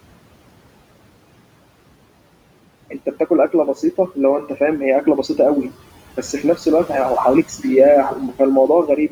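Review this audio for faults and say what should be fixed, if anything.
Throughout, the background noise drops away between phrases and swells back under the speech. These are noise suppressor artifacts: gain on noise-dominated bands is cut by about 18 dB each frame. Since the room noise already sits about 18 dB below the speech, lowering the suppression depth or switching it off would prevent this pumping.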